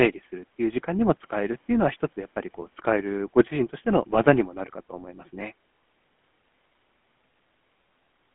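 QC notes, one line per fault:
throughout: GSM full-rate codec. The sound is band-limited to roughly 200 Hz to 3.4 kHz, so nothing bright survives above the line band. The codec rebuilds the vocal tract from a filter model driven by a coarse, regularly spaced pulse excitation. That sparse excitation gives the speech a buzzy, gravelly roughness that is plainly audible. The damage fits the 13 kbps full-rate GSM coder.
2.62 s and 5.41 s: underrun with held sample. Each time the output buffer runs dry and the converter freezes on its last value. The waveform goes flat, so the sound briefly stops without a sharp click. The first gap lasts about 2.5 ms. The second lasts about 1.3 ms, which fits a 64-sample stall at 48 kHz. Almost no audio is lost, because playback resumes where it stopped. The return is therefore soft.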